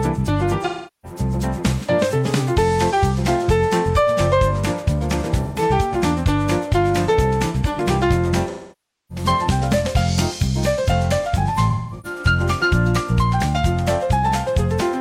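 AAC frame loss with concealment hits at 0.65–1.19 s, 5.43–5.62 s, 8.50–9.25 s and 11.53–12.20 s. The decoder patches missing frames from earlier spectrum, leaving smeared, noisy gaps.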